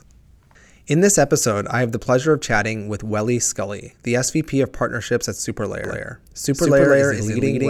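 From 5.84 s to the end, a doubled audio track appears: an identical copy about 200 ms late, roughly as loud, likely from an out-of-step duplicate path. Waveform and spectrogram show each syllable repeated, full-band, starting abruptly.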